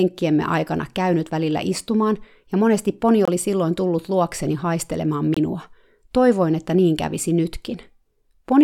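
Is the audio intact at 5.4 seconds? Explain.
No. Around 5.4 seconds a Bluetooth dropout is audible, likely caused by audio packets reaching the headphones too late and being discarded. The output cuts to silence from 5.34 to 5.38 s, a gap that fits one lost packet, then the speech resumes further along, as if it had played on.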